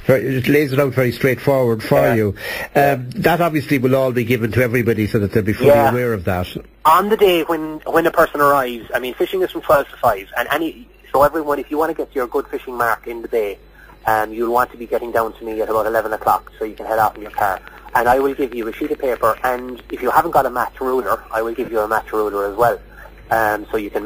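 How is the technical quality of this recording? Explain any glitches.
Two faults mar the recording, both in its last third.

From 17.05 to 20.12 s there is a train of clicks. Something, likely interference from nearby equipment or a faulty connection or power supply, injects a pulse about 9.5 times a second at a regular pace. That gives roughly thirty similar ticks, some about as loud as the sound itself.

At 21.65 s, lost LE Audio frames leave a 30 ms gap, which fits three 10 ms LC3 frames. The decoder fills the gap by reusing the last spectrum with randomised signs, so for that instant any tone dissolves into a brief noisy smear.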